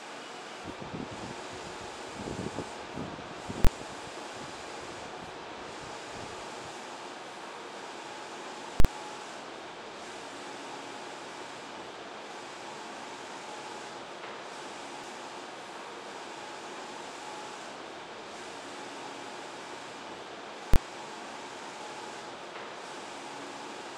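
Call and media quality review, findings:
Invalid numbers at full scale, three hard bangs at 3.65–3.67 s, 8.80–8.85 s and 20.74–20.76 s. Output pinned flat at one extreme value, beyond the audio's peaks, for about 23 ms, 46 ms and 23 ms, consistent with 1024-, 2048- and 1024-sample processing blocks. Probable component: a DSP stage whose arithmetic produced infinite or invalid values, clamped to the positive or negative limit. Blocks are too short for separate edge pops, so each event is heard as a single bang.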